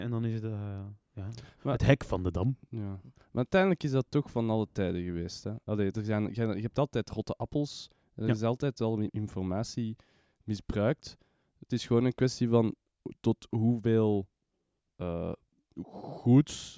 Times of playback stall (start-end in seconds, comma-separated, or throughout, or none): none